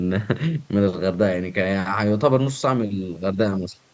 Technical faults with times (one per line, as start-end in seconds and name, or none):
none